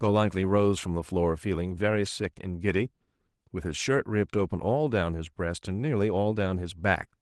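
Nothing goes wrong anywhere in this speech recording, and the Opus voice compression it passes through leaves only a light touch of coding character behind.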